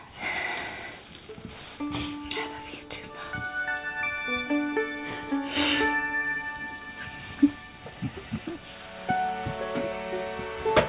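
Nothing stood out on listening, and the audio stops at 4 kHz, which fits an ordinary narrowband call codec such as G.711.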